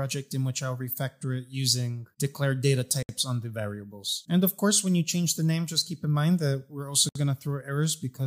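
At 3.03 s the sound drops out for about 62 ms, and at 7.09 s it drops out again for about 64 ms, about 4 s apart. Each is a gap at a join of encoded pieces: separately encoded segments were butted together with the encoder's start-up delay and final-frame padding left in. The sound cuts off, then resumes where it stopped. A waveform shows a flat stretch with slightly softened edges, and a spectrogram shows a clean vertical blank band across all frequencies.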